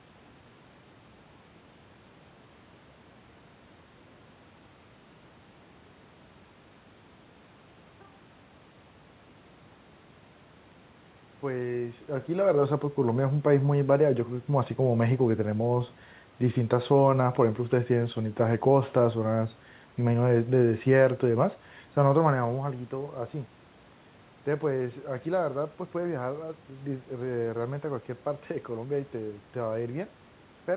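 No technical faults occur anywhere in the recording.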